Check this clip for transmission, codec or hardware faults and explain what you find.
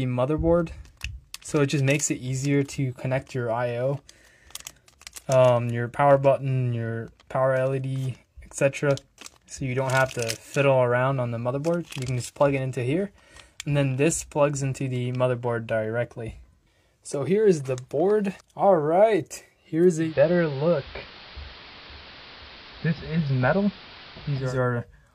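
One fault is present: the receiver falls back from its digital stream to analogue for several seconds. From 19.96 s to 24.58 s there is digital radio blending to analogue. A hybrid receiver lost the digital signal and cross-faded, over about 230 ms, to the AM broadcast of the same station, then returned. The level stays matched, but the AM section carries hiss roughly 20 dB below the signal and the narrower bandwidth typical of AM, dulling the treble until the digital path resumes.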